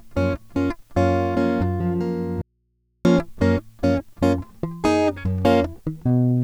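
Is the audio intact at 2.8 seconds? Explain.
No. A likely momentary loss of the music feed upstream, with the path after the break still live, causes an audio dropout to a faint residue from 2.41 to 3.05 s. The music cuts abruptly for about 635 ms, leaving only mains hum roughly 50 dB below the music.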